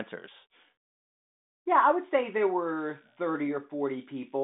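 From 2.77 s to the end, just after "I would say there", a faint buzz of around 70 pulses a second sits far below the speech. This is computer activity noise: processor or graphics load changes disturb the audio circuit's shared ground, independent of the telephone-band sound.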